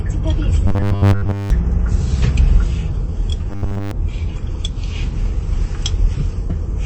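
Throughout, the sound is dull and watery, with plainly audible swirling, most likely MP3 compression at a low bitrate around 32 kbps. Its steady treble cut sets it apart from dropouts. From 0.67 to 1.50 s and again from 3.50 to 3.91 s, a robotic sound from repeated short buffers takes over. Repeated 10 ms fragments replace most of the audio, likely from late-arriving buffers, forcing a rigid 100 Hz metallic buzz that swirling compression never produces.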